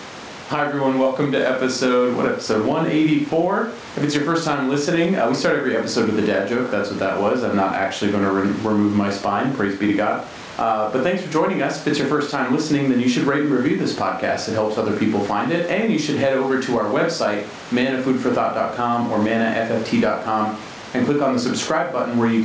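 Gain pumping runs through the whole clip. Between phrases the room noise, about 35 dB below the speech, swells up. Under each loud syllable it ducks by around 10 dB. The likely cause is gain set far too high, with a fast limiter pulling it down.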